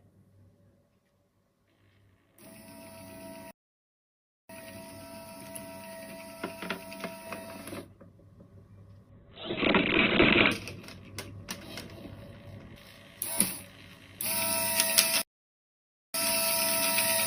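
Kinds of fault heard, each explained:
Playback stall: at 3.51 to 4.49 s and again at 15.22 to 16.14 s, the output drops to silence mid-flow, for about 0.98 s the first time and 0.93 s the second. Silence of that length and abruptness is likely the player's buffer running dry or its output thread being held up, so nothing reaches the device until playback can pick up again.
Call bitrate drop: from 9.10 to 10.59 s, the encoder's rate falls from 48 kbps to 7 kbps and stays at the bottom for 1.43 s. At that budget the codec quantises far more coarsely and narrows its audio band from 20 kHz to 4 kHz, so the sound turns muffled and gritty, with a watery smear, before the higher rate and full bandwidth return.
Pre-emphasis left on: from 12.76 s to the end, the treble sits about 11 dB higher at 10 kHz than at 1 kHz. The tilt matches a J.17 emphasis curve whose complementary de-emphasis was never applied on playback. 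The sound comes across thin, brittle and over-bright, with exaggerated sibilant edges throughout that final stretch, including around the second stall.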